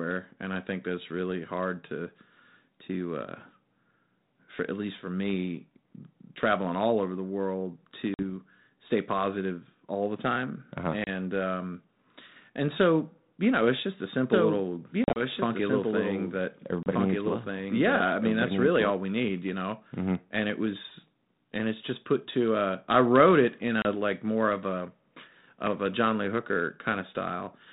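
A speech recording carried over a G.726 ADPCM link at 32 kbit/s, so nothing gets through above 4 kHz. It has two problems. The first is packet loss on an ADPCM call. There are hard-edged silent holes at 8.14 s (about 50 ms, between "all over the world" and "stay positive all the"), 11.04 s (30 ms), 15.04 to 15.22 s (80 ms scattered over 120 ms, longest gap 40 ms), 16.83 s (30 ms) and 23.82 s (30 ms, between "I wrote it in" and "like more of a"). After each hole the decoder's predictor and step size have drifted from the sender's, so the audio comes back with a bit of grit before settling. The second is a doubled audio track from 14.32 to 18.90 s, right after "know it's just a" and running up to "we need you know". A clean, full-band second copy trails the original by roughly a second and a half, sitting about 5 dB down. It has no reverb tail or room colour, and it switches on and off abruptly, which likely means a second, slower capture path got mixed in.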